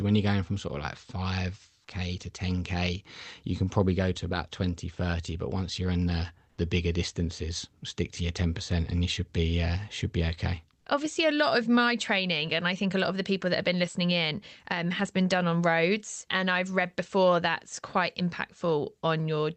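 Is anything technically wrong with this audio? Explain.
Yes. From 6.49 to 6.57 s, for about 80 ms, the background in this speech clip is replaced by comfort noise. The likely cause is discontinuous transmission in the Opus codec: the sender stops sending during a speech pause and the receiver substitutes synthetic noise. That noise is steady and featureless, about 1 dB quieter than the real background, which sits about 41 dB below the loudest speech. The call path itself limits the audio to roughly 8 kHz, consistent with Opus at around 32 kbps.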